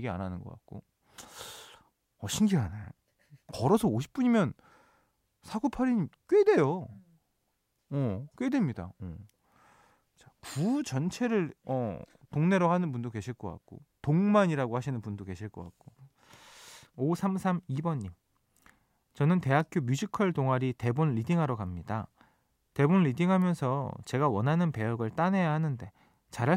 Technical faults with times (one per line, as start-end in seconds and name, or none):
3.69 dropped samples
18.75 dropped samples
19.60 electrical switching spike
23.42 electrical switching spike